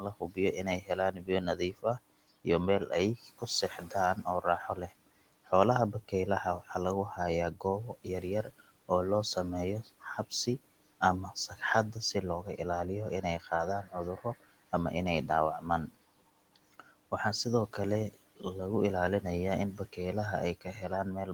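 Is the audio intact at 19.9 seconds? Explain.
No. From 19.77 to 19.98 s the speech sounds swallowed and faint, dipping by about 10 dB for around a tenth of a second in total. This is speech cut by the noise suppressor, which mistook that soft stretch for the room noise beneath it and turned it down.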